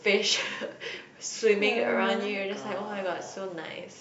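No technical faults are audible anywhere in the recording.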